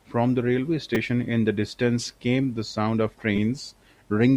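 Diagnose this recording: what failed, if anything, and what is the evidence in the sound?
What failed is at the driver or buffer stage: a repeated buffer, twice in this speech. At 0.95 s and again at 3.36 s there's a brief buzzy click where one tiny slice of sound repeats back to back with hard joins. Fresh samples didn't reach the device in time, so it replayed its last block. The repeat spacing fits a 5 ms buffer played twice extra, then three times extra, and roughly 10 to 15 ms of real audio is lost each time.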